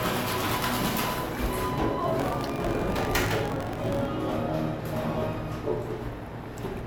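Generation loss runs throughout: the sound is swirly, hollow and smeared with blurred attacks, likely from about four passes through 128 kbit/s MP3, each adding fresh quantisation noise.

Buffer tearing runs from 2.18 to 4.05 s: writer and reader have slipped, so a small slice of each buffer holds audio about 70 ms old, giving a robotic 46.9 Hz buzz that fits a 1024-sample buffer.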